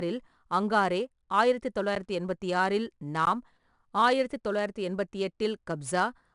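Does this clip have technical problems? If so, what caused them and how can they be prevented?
Yes. 4-bit ADPCM compression runs throughout the speech: each sample is coded as a coarse 4-bit step from a prediction, so a gritty hiss rides on every loud passage, nothing survives above 10.6 kHz, and the damage is plainly audible, consistent with a bitrate near 89 kbps. Prevent it by keeping a lossless or higher-quality codec.

Blocks of digital silence appear at 1.95 s, between "அங்காரே ஆயிரத்து" and "எண்பத்தி ஆறில்", lasting 10.67 ms, and at 3.25 s, just after "எண்பத்தி ஆறில்", lasting 16 ms. The audio drops abruptly to zero and returns. The first gap fits a 512-sample buffer that was not filled in time. Prevent them with larger buffers or a higher-priority audio thread.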